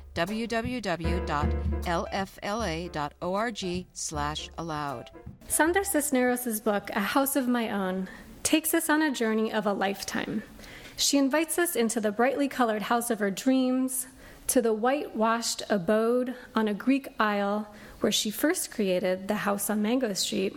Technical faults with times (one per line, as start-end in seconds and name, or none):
none